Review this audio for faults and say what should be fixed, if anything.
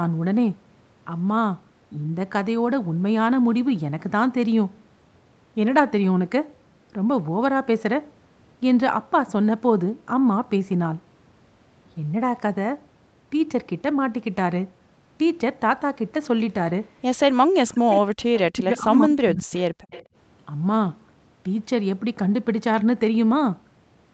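Speech suppressed in double talk at 17.31–18.1 s and again at 18.48–19.56 s: the voice drops by roughly 40 dB, for about 0.7 s and then about a second. This is likely the echo canceller turning everything down while both ends speak at once, unable to separate this talker from loudspeaker echo. Prevention: use a canceller with better double-talk detection, or reduce loudspeaker coupling so it has less echo to fight.

Echo leak at 18.34–18.42 s and 19.9–20.03 s: short scraps of a delayed copy arrive 198 ms behind the original, roughly 15 dB and then 20 dB below the speech. This is likely far-end loudspeaker pickup that the echo canceller failed to remove fully and sent back. Prevention: at the far end, switch to a headset, or lower speaker volume and improve echo-path modelling.

Background gated by the echo canceller at 19.84–19.9 s: the room sound drops by about 40 dB for well under a tenth of a second, then returns as the canceller releases its hold on the microphone during loudspeaker playback. 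Prevention: soften the suppressor's gating and add comfort noise so the background stays continuous.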